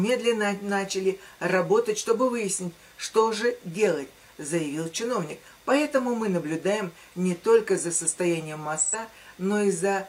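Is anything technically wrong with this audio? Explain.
Yes. From 8.77 to 8.95 s there is AAC frame loss with concealment. About 85 ms of coded audio, consistent with two lost frames, went missing, and the decoder rebuilt it from the preceding spectrum, leaving a brief smeared, noisy, phasey patch instead of a clean gap.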